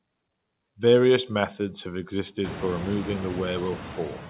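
From the start of the speech, there are noise suppressor artifacts. The suppressor pulls down whatever bands it judges to be steady noise, by about 17 dB, and it keeps doing this frame by frame. So the background dips in the gaps and swells back under the voice. Once the room noise jumps by about 24 dB, at around two and a half seconds, it sits about 16 dB below the speech, within the 4 kHz ceiling of the A-law call.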